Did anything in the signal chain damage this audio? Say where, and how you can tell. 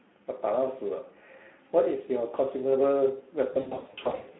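Yes. Speex codec damage runs throughout: hoarse, noisy speech confined to 200 Hz–3.5 kHz, consistent with about 11 kbps, where too few bits remain for the excitation.

VoIP packet loss concealed by the speech codec appears from 3.53 to 4.27 s. The decoder extrapolates pitch and filter across scattered gaps of up to 60 ms, producing fading buzzy or noisy stretches.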